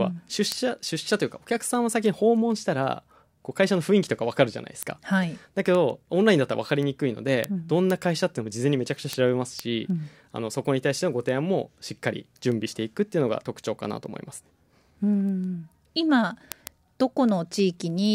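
From 0.21 s to 18.06 s the speech carries word clock ticks, about one every 0.15 s. Each tick is sharp and of uneven strength, and comes where a single sample is dropped or repeated because the receiving device runs on its own clock, roughly 150 ppm apart from the sender. The steady rate sets it apart from random dropouts or crackle.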